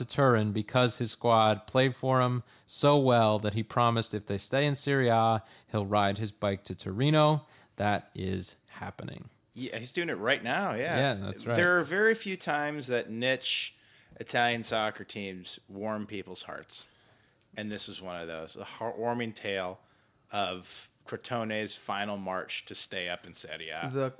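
No technical faults are audible.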